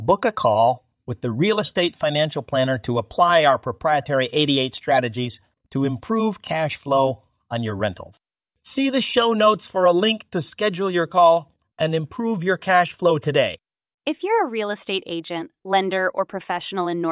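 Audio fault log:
No technical fault can be heard anywhere in the speech signal.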